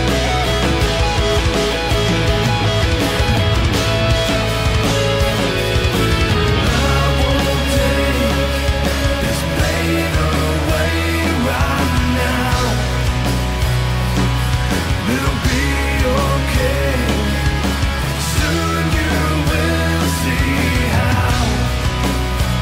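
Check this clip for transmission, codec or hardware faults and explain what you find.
Nothing in the audio points to a transmission, codec or hardware fault.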